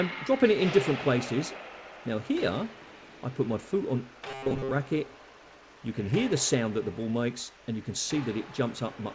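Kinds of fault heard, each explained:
Robotic sound from repeated short buffers: from 4.31 to 4.71 s the sound turns into a rigid metallic buzz at 134 Hz, likely from a roughly 7.5 ms buffer replayed over most of that span; spectrograms show evenly spaced flat harmonics, waveforms an identically repeating cycle.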